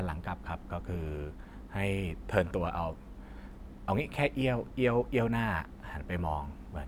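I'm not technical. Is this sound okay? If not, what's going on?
Yes, this sound is okay, and there's nothing going on that needs fixing.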